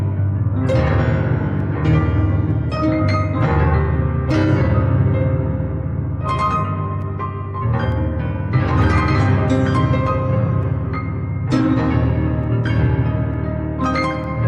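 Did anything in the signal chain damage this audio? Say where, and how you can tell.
Yes. At the driver or buffer stage, two devices likely running on separate clocks drift apart, so the buffer periodically drops or repeats a few samples. This causes clock drift buffer slips, regular clicks every 0.90 s from 0.70 s to 14.24 s.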